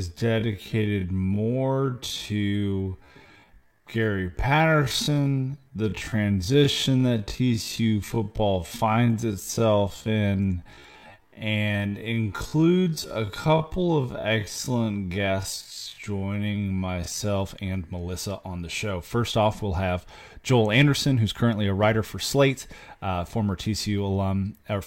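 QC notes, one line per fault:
0.0 to 17.4 s, time-stretched section: the speech runs at about half pace (0.521x) while its pitch stays where it was, so everything drags. At 17.4 s the pace jumps back to normal with no shift in pitch. The likely cause is software stretching this stretch of audio to fill a longer slot, keeping pitch steady by repeating small slices of the waveform.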